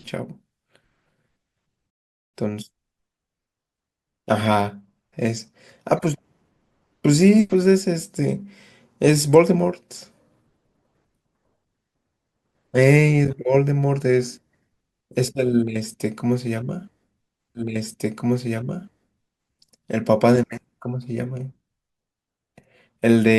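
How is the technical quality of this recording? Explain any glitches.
Two playback glitches break up the speech. A playback stall from 1.90 to 2.34 s is likely the player running short of data or being blocked, so the speech cuts to silence for about 0.43 s and then resumes. A stream segment repeated at 17.55 s means the same two-second segment was queued twice, so that stretch of speech plays again after a small blip at the jump back, running to 19.55 s.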